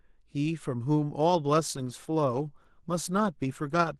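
At about 1.30 s the adaptive stream drops to a lower bitrate and stays there to the end of the clip, a switch that fits a step down from around 64 kbit/s to around 16 kbit/s Opus after the connection slowed. The change is abrupt but leaves no gap. From that point coding artefacts grow audibly thicker.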